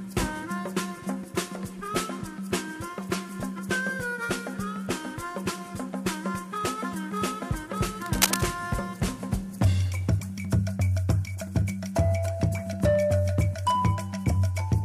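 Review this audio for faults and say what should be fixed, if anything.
Cable scratch noise runs from 8.02 to 8.47 s as a dense, uneven scratching burst at roughly the level of the sound itself. The likely cause is a worn cable or connector shifting, which makes its contact resistance fluctuate rapidly. Replacing the cable and securing it against movement would prevent this.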